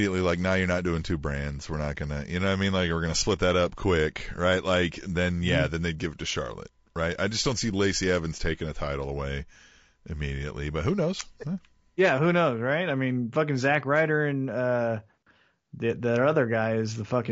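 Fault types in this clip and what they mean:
Low-delay AAC compression: plainly rough, grainy speech throughout, likely AAC-ELD near 32 kbps; spectrogram shows noise filling harmonic gaps and a reduced or synthetic top band.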